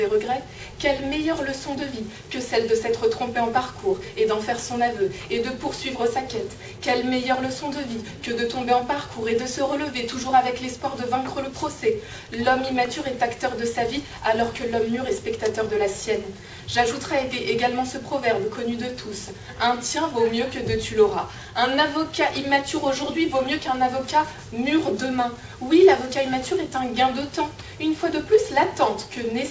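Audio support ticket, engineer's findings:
No defects found; the signal sits on a normal call path, band-limited with nothing above 8 kHz, which fits a wideband call codec such as G.722 at 64 kbps.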